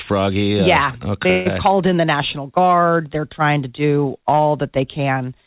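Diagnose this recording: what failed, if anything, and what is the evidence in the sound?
Call audio freeze at 1.30 to 1.47 s: the sound smears into a fading buzz for 153 ms, then resumes exactly where it stopped. Nothing is lost, but later audio runs 153 ms late. Likely cause: late packets emptying the jitter buffer at the network stage.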